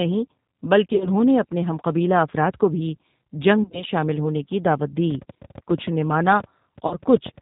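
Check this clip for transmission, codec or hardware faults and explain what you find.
There are three problems here: plainly audible low-bitrate codec coloring, three dropout patches, and a run of clicks near the end.

G.729 codec: Throughout, the speech sounds band-limited, slightly rough and synthetic. That fits G.729A at 8 kbit/s, which rebuilds speech from a filter, pitch predictor and sparse pulses and cuts everything above 4 kHz.

VoIP packet loss concealed by the speech codec: At 0.89–1.10 s, just before "نے اپنے ہم قبیلہ", and at 3.63–3.84 s, just before "شامل ہونے کی دعوت", the speech smears into a fading buzzy tone or coloured noise. A shorter patch follows at 6.87–6.99 s. This is the decoder extrapolating its last pitch and filter over missing audio. It points to roughly 70 and 80 ms lost in scattered 10 ms frames, and 40 ms in the last patch.

Train of clicks: From 5.11 to 7.39 s, after "شامل ہونے کی دعوت", there are around twenty similar pops, about 8.4 per second and unevenly spaced. 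They're roughly as loud as the speech and likely come from interference or a faulty connection or power supply.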